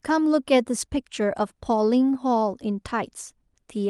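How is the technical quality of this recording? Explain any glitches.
Nothing stood out on listening to this speech recording, so there are no glitches to explain.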